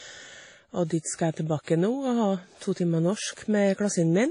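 A short speech clip with transcoding between lossy codecs throughout: the audio has no content above about 10.1 kHz, and two distinct sets of coding artefacts sit on top of each other. The artefacts of the first pass are still there, and a second encoder has spent its bits re-coding that damage while adding its own. The likely chain fits a roughly 32 kbit/s WMA encode followed by a Vorbis encode near 47 kbit/s, with the lowest band limit in the chain surviving.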